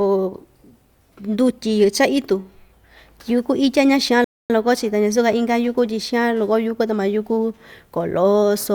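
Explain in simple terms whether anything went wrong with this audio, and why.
Something went wrong at 4.24 s: a rebuffering stall. The player used up its downloaded audio and had to wait for more, so the speech drops to silence until 4.50 s, then picks up exactly where it stopped. Nothing is missing; it just pauses for about a quarter of a second.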